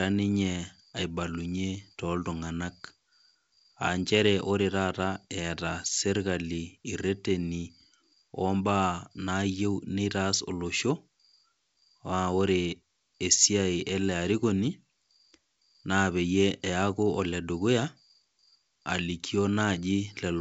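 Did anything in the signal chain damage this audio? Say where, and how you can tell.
No, nothing in the signal chain damaged this audio.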